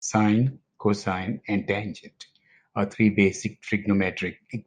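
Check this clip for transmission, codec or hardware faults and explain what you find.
No faults can be heard anywhere in this speech recording. Nothing in the audio calls for comment.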